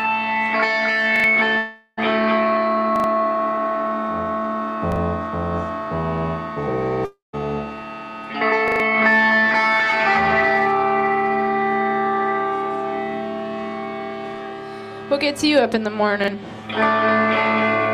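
At 1.16 s a repeated buffer occurs. A 40 ms piece of sound plays twice more, with a hard join at each repeat. It is heard as a short stutter. From 1.57 to 1.99 s the sound turns into a fading buzz, then a brief silence. The likely cause is a long network dropout, with about 0.4 s lost. The same stutter returns at 2.96 s and once at 4.92 s. From 7.05 to 7.35 s a second dropout likely hits, with about 0.28 s gone and a longer silent tail. Further repeats land at 8.68 s, with three extra plays, and at 16.24 s.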